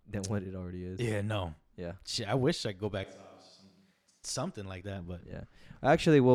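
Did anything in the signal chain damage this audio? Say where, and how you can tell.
Yes. From 3.04 s, after "wish I could go", the speech abruptly turns hollow, roomy and thin, about 10 dB quieter, with background noise only around 25 dB below it, until 4.24 s, before "something like that but". This is likely a switch to a distant microphone at the capture stage, after the close mic's feed dropped.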